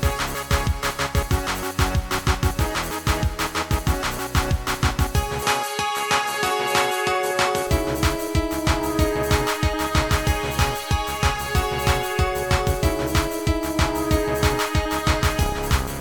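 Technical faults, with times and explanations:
5.42–7.67 s, input switched to a poorer device: with no gap or jump in level, content above 12.9 kHz vanishes and a faint new noise floor appears, roughly 45 dB down, likely from another microphone. A spectrogram shows a flat ceiling over that span; the waveform envelope is unchanged.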